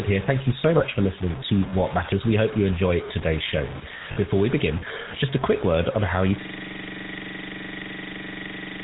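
Throughout the speech there is a grainy, gritty distortion that tracks the signal, with an error floor only about 15 dB below the speech. Quiet stretches break up rather than hiss, which points to low bit depth without dither, likely truncation to around 5 bits.

Also throughout, the GSM full-rate codec adds plainly audible damage. There is nothing above 4 kHz, and the voice has a buzzy, gravelly roughness from the pulse-driven vocal-tract model. This is consistent with the 13 kbps full-rate coder.

At 0.78 to 0.83 s, between "you so" and "for listening to", lost GSM frames leave a brief metallic ring where the decoder repeats the previous frame's parameters. The gap fits one 20 ms frame. At 4.12 to 4.18 s, after "you enjoy today's show", a similar ring lasts about 40 ms, which suggests two frames.

From 6.41 s to the end, just after "word on how you", a system hang loop takes over. A 42.7 ms slice repeats exactly, dozens of times, giving a machine-gun stutter at 23.4 Hz. 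This fits a 2048-sample ring buffer cycling while the system was frozen.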